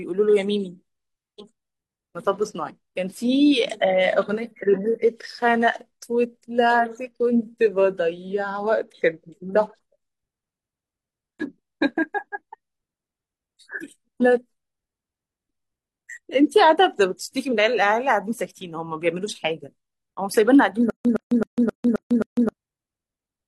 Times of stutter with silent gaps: 20.90-22.49

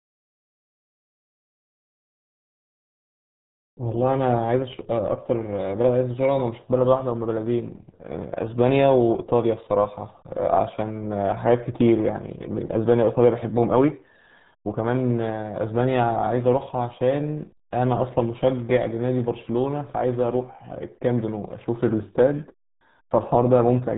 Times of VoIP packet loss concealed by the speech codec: none

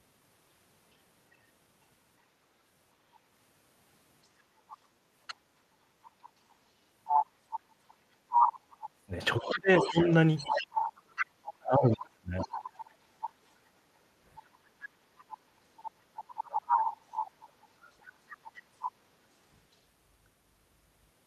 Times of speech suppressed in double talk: 7.81-10.10, 11.66-12.50

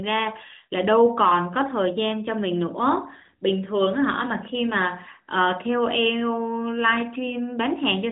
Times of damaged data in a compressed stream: none

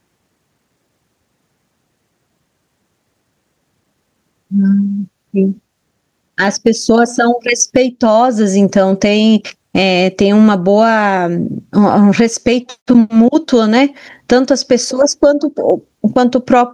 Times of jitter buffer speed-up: none

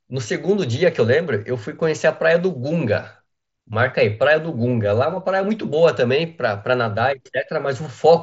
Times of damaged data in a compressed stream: none

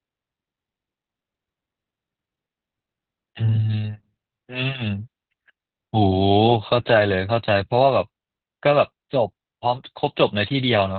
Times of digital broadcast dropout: none

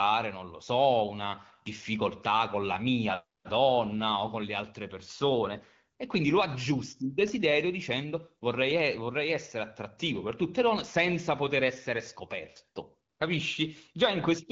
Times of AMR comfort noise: 3.39-3.43, 13.09-13.19

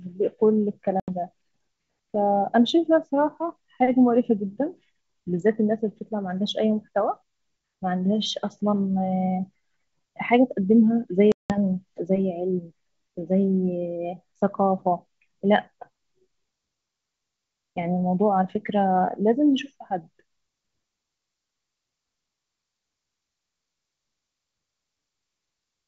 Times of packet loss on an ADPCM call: 1.00-1.10, 11.32-11.57

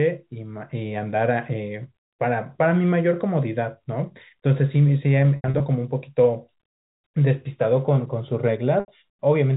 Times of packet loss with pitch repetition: 5.36-5.60, 8.80-8.88

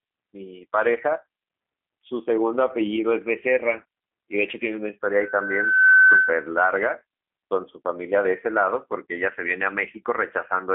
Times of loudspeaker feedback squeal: 5.13-6.52

